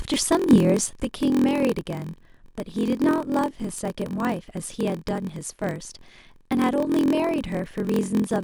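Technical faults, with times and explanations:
Throughout, block size mismatch (padded): each block arrives short and is zero-filled to the reading size, so a brief silence recurs about 43.1 times per second. This produces a steady 43.1 Hz buzz, which fits a 1024-sample read block. The speech runs slower by a factor of 0.938 while keeping its timbre.
1.03 s to 8.44 s, one channel drops out: from 1.03 s to the end, the level of the speech falls abruptly by about 6 dB and stays there, likely because one stereo channel was lost before the mono sum.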